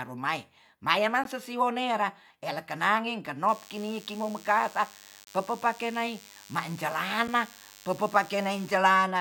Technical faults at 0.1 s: none

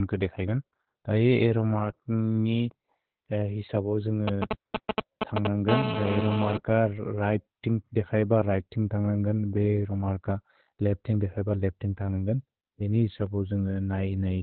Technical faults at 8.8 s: Opus voice compression

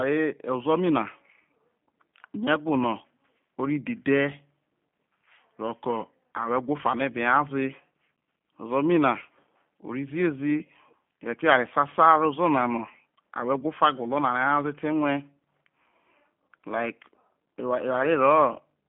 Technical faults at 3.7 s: G.729 codec

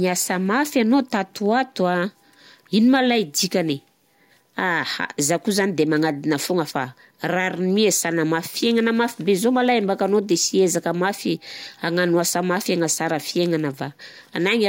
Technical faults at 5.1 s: none

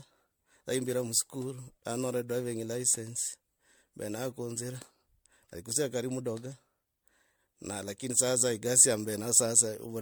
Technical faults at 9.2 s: generation loss

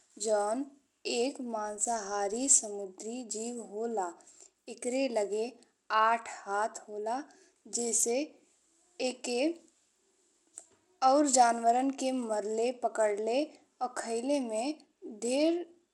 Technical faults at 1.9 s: Bluetooth SBC compression; filter restarted on every block

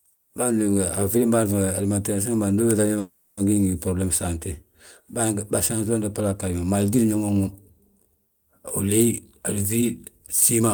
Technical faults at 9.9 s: jitter buffer speed-up

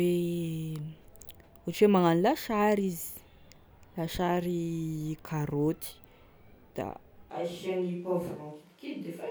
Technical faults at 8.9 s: switch to a distant microphone

